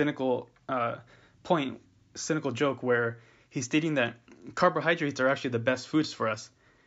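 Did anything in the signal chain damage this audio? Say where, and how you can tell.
No, nothing damaged this audio.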